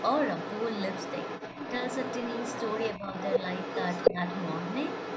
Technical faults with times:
0.00-5.17 other side's voice leaking through
2.99-3.07 speech suppressed in double talk
4.12-4.17 speech suppressed in double talk

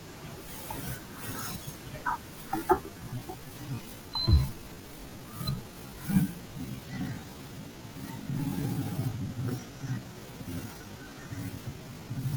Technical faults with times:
2.47-12.37 time-stretched section

